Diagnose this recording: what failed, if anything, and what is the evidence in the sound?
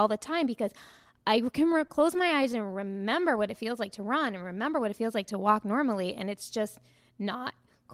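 The network stage failed, causing repeated stalls (stutter) from 1.59 to 2.88 s, just after "the time because I". Packets arrived late or too slowly. The jitter buffer kept running dry. There are 13 brief gaps, none longer than 13 ms. Each was filled by extending the last sound, adding 129 ms in total, about 10% of that span. No audio is lost. The speech drags and stutters instead.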